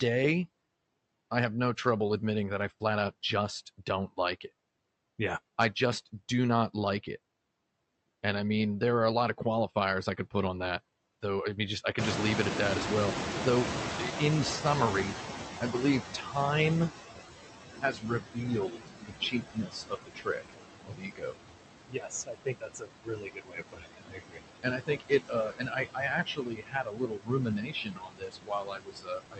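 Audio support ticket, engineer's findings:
Noise suppressor artifacts, whole clip: residual background noise, sinking in gaps and rising under speech. The suppressor's per-band gain cuts about 19 dB wherever it judges the noise steady, frame by frame.

Noise suppressor catching up, 11.98–17.0 s: room noise jumps about 24 dB near 12 s, to roughly 6 dB under the speech, and passes through under-reduced at first. The estimate takes about 5 s to adapt before settling at about 16 dB of reduction.

Speech cut by the noise suppressor at 16.22–16.36, 17.81–18.45, 18.69–20.52, 20.85–21.35, 21.88–24.4, 24.63–25.12, 25.28–26.03 and 26.25 s to the end: parts of the speech are swallowed, with dips of about 10 to 21 dB. Against the louder noise floor, the suppressor classes quieter speech as noise.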